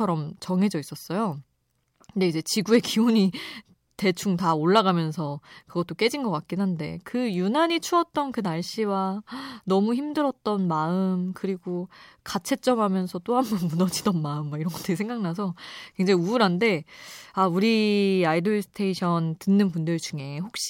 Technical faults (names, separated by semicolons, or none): none